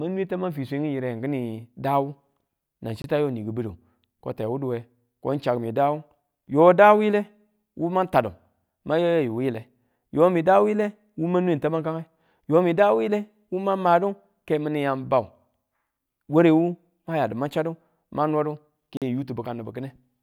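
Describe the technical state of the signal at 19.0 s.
A block of digital silence runs from 18.97 s to 19.02 s, about 46 ms of the speech replaced by zeros. A stretch that length points to the output buffer not being filled in time, which fits a 2048-sample buffer. The signal drops straight to zero and returns with no fade, and with this length it is heard as a short, audible hole rather than a single tick.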